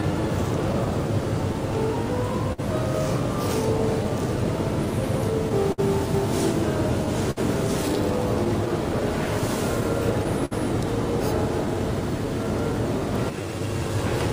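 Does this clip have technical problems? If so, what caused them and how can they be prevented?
Yes. Small timing hiccups recur unevenly throughout, and the audio drags slightly. This is clock drift between sender and receiver: the sender's clock runs roughly 4% slow, so the jitter buffer keeps draining and the receiver must keep padding. Prevention: run the receiver with adaptive clock recovery that tracks and compensates the sender's rate smoothly.

From 0.11 s to 13.89 s the audio runs at 98% speed, with about a third of a second added overall. These are repeated timing corrections: the receiver stretches short pieces, always lengthening, at uneven spacing, to stay in step with the slow sender. Prevention: use fine-grained time-scale modification rather than coarse piece repeats.

Between 2.53 s and 2.60 s one sound is held too long, for 55 ms, before the audio resumes where it left off. 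This is a short stall from a late packet: the buffer ran empty and the receiver stretched the last sound until the packet arrived. Prevention: keep a slightly deeper jitter buffer margin.

From 5.49 s to 10.53 s come around ten brief ticks and smears, the longest around 50 ms and together around 200 ms. These are scattered short gaps: late or lost packets, each patched by continuing the previous sound, with nothing missing. Prevention: add forward error correction and a more stable network path.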